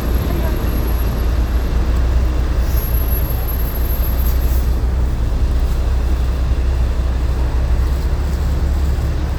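No technical faults can be heard anywhere in the recording.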